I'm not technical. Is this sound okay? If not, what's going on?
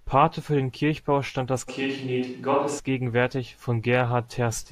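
No. From 1.70 to 2.78 s, just after "stand das", the speech turns roomy and hollow with less bass, then snaps back. This is a switch to a distant microphone, likely because the close microphone's signal dropped out. The loudness stays about the same.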